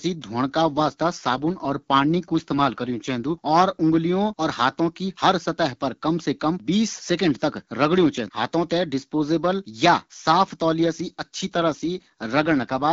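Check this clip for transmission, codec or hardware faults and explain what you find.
Two AMR rate drops occur in this wideband speech clip.

From 0.62 to 3.44 s, ending just before "और उँगलियों और", and again from 10.74 to 12.92 s, starting just after "थें डिसपोजियेबल या साफ", the voice turns rougher and more synthetic, with no gap and no narrowing of the band. A weak radio link has pushed the AMR-WB encoder to a lower rate so that more bits go to error protection. The sound fits a step from 12.65 down to 8.85 kbit/s.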